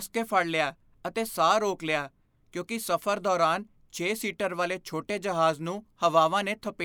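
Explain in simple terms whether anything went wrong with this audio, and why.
Nothing went wrong here: the recording of speech holds steady throughout, with no dropouts, distortion or glitches anywhere to point to.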